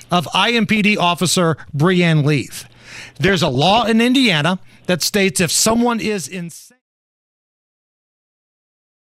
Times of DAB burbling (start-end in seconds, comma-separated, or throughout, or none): 3.09-3.91, 5.62-5.80